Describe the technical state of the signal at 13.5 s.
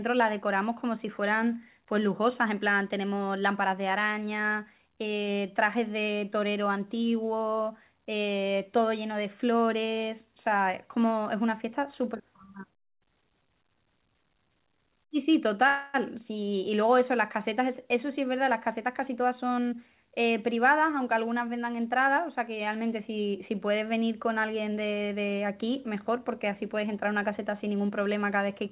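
At 13.5 s the speech is intact, with no dropout, glitch or distortion, only the narrow telephone band of the call path, which holds nothing above 4 kHz.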